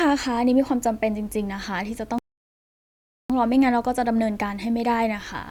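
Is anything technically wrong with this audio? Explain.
Yes. The speech stops at 2.18 s and stays silent until 3.30 s, a rebuffering stall. The player exhausted its store of downloaded audio and paused playback until more data arrived, inserting about 1.11 s of dead air. When the sound returns it picks up at exactly the point where it broke off, so no material is missing; the fault is purely a timing gap that stretches the clip and interrupts its flow.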